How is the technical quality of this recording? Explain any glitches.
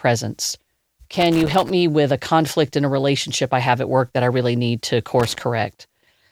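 The speech is marred by two bursts of loose connector crackle, from 1.15 to 1.72 s and from 5.20 to 5.41 s. A worn contact intermittently breaks the signal path, chopping the audio into irregular scratchy crackles.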